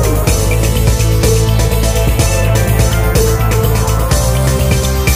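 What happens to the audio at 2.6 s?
Nothing goes wrong at 2.6 s: the audio plays through that moment intact, with no dropout, click or distortion.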